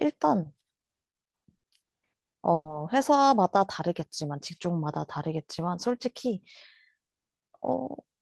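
Bursts of packet loss at 1.57–1.66 s and 2.53–2.68 s: the receiver stretches the last speech sound and fades it out (60 ms, then 120 ms plus 30 ms silence) before resuming further on.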